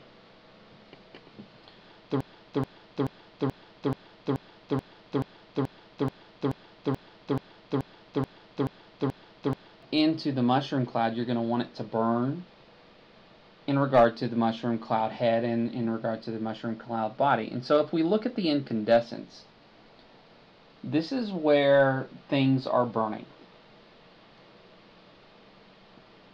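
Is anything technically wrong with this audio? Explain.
Yes. There is a broken-record loop from 2.21 s to 9.83 s. A fragment of about 0.43 s repeats 18 times, back to back, with no variation. The likely cause is a stall in the player, encoder or stream, which kept resending the last piece it held. Each pass is identical, so the sound stutters mechanically on one short chunk. Whatever should have played in those seven or so seconds is missing.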